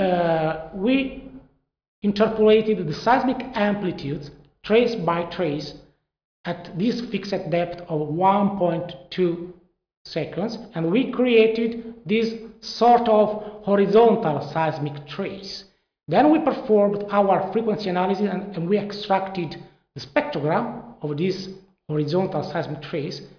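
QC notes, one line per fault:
No faults found on review; the sound carries no dropouts, clicks, distortion or level problems.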